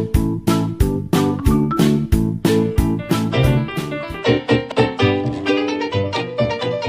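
Compressed frames skipped at 4.72 s: whole frames of the encoded stream never reach the output, either missing from the file or rejected by the decoder as damaged. The sound jumps ahead by roughly a fifth of a second, leaving an abrupt join.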